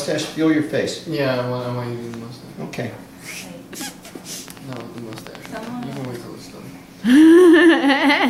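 From 4.48 to 6.06 s there's a train of clicks, around fifteen irregularly spaced pops at about 10 per second, likely interference or a flaky connection, poking a few dB above the sound.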